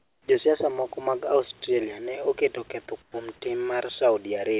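From 0 to 0.28 s and again from 3.02 to 3.14 s, the sender likely stopped transmitting during pauses, so the receiver inserted comfort noise in place of the background: a flat, featureless hiss about 14 dB quieter than the real room sound. At 3.12 to 3.14 s the onset was clipped by the voice detector, likely because it reacted late and the first 20 ms were never sent. The sound snaps in abruptly without its soft start, against a band-limited call path with nothing above 4 kHz.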